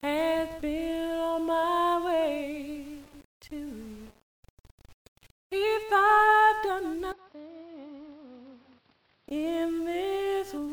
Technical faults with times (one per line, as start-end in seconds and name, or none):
7.12-9.28 input switched to a poorer device